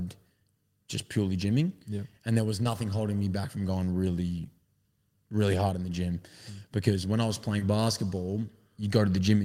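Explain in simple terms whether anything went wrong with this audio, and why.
Twice, a tiny piece of the call arrived too late to be played, a short concealed packet loss. The receiver covered each gap of about 20 milliseconds by stretching the sound just before it and then blending back into the real audio. You hear this as a brief smear or wobble at 2.63 s, between "there was" and "holding me back from", and again at 7.59 s, just after "when I was".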